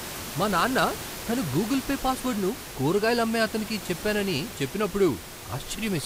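No technical faults can be heard anywhere in this speech recording. The only thing beneath the speech is the ordinary noise of the room, sitting about 12 dB lower and captured along with the voice.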